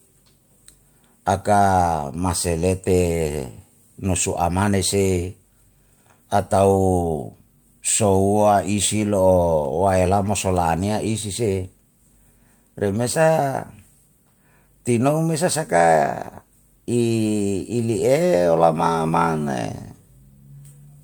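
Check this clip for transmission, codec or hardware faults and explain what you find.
No transmission, codec or hardware faults are audible here.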